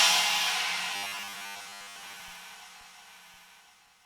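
From 0.94 s to 2.21 s the sound turns rigid and metallic, a flat buzz near 100 Hz that still traces the rough outline of the audio but loses its natural movement. This is robotic sound from repeated short buffers. The likely cause is audio arriving too seldom, so the playback side keeps replaying a tiny chunk, around 10 ms to fit that buzz, covering most of the stretch while the real material in between is skipped.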